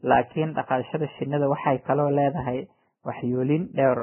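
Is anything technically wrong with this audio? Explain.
Yes. The speech runs through heavy lossy coding from start to finish, most likely Vorbis compression. Nothing is present above 3.1 kHz, so the treble is simply gone. The remaining upper band has been quantised so coarsely that fine detail turns into hiss of similar energy. The damage fits a very low bitrate, around 10 kbps. It sounds dull, grainy and hissy, with roughened tones and smeared consonant attacks.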